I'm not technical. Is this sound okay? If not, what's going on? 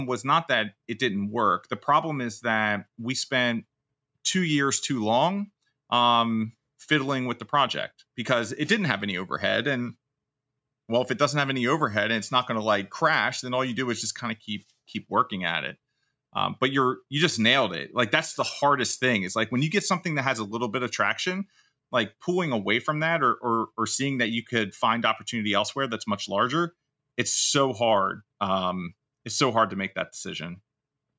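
Yes, this speech clip sounds fine with nothing wrong to worry about; it's simply been through a phone or video call's normal microphone processing, which trims the deepest bass and keeps nothing above about 8 kHz.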